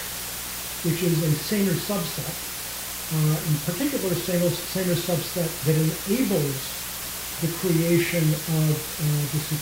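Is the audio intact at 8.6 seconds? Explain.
No. At 8.6 seconds two faults are present, and both run through the whole clip.

The first is mains buzz. Sharp switching spikes from the power supply leak into the signal twice every cycle of the 60 Hz mains. These spikes carry a long series of harmonics, stretching well up into the kilohertz range. The result is a steady, raspy buzz sitting roughly 20 dB below the sound. It does not change over time.

The second is low bit depth with dither. The audio is stored with only 4 bits, so each sample is rounded very coarsely. Dither was added before rounding. That turns the rounding error into even white noise instead of distortion. Here the noise is nearly as loud as the sound itself. It is heard as a constant, heavy hiss.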